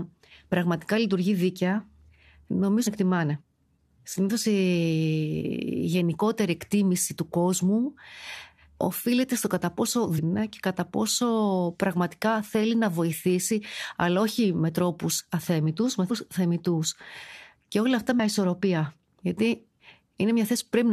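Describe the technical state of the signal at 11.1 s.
At 11.1 s the speech plays through cleanly, with no dropout, distortion, glitch or other technical fault at that point.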